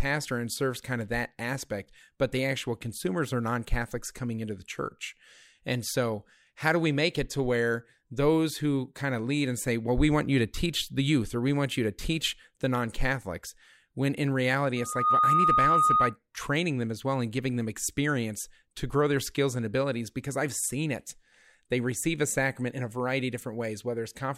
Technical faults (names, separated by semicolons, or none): loudspeaker feedback squeal